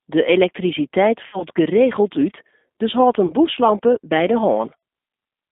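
The whole recording went through a G.729 codec at 8 kbit/s, which rebuilds the speech from a vocal tract model and a few pulses per frame inside a 200 Hz to 3.6 kHz band. The result sounds narrow, plainly rough and slightly synthetic.

VoIP packet loss, concealed by the speech codec, occurs at 1.27 to 1.43 s, 3.26 to 3.32 s and 4.77 to 4.83 s. About 60, 40 and 60 ms of audio went missing, which fits runs of 20 ms packets. Each gap is replaced by a stretched, buzzy tone or coloured noise that fades, and the speech stays weak or distorted for a short while after each one.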